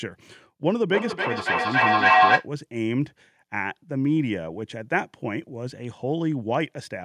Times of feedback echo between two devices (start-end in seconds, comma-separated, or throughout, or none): 0.67-2.50